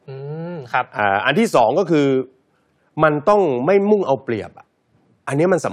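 No technical faults can be heard anywhere in the recording; the signal stays intact and continuous throughout the speech.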